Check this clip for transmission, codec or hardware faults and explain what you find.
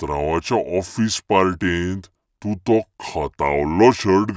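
There is one fault, and it runs through the whole clip. The speech plays with a wrong sample rate. The samples are replayed more slowly than they were captured, with no rate conversion. Speed falls to 0.726 of normal, and pitch drops by about 5.5 semitones. That ratio fits speech recorded at 22 kHz but played at 16 kHz. Voices sound low and slow, because timing and pitch shift together.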